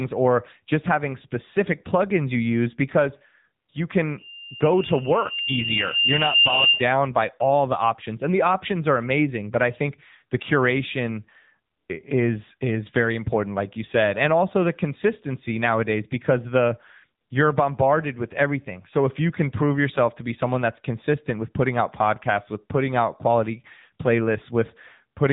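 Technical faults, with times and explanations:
Throughout: AMR narrowband mobile codec. Nothing above about 3.8 kHz survives, so the speech sounds thin and telephone-like, with sibilants dulled. The codec rebuilds the voice from a vocal-tract filter driven by a sparse set of pulses per subframe. With too few bits to model the excitation finely, the result is plainly audible buzz and a synthetic edge. This fits one of the mid-range AMR-NB modes, near 8 kbps.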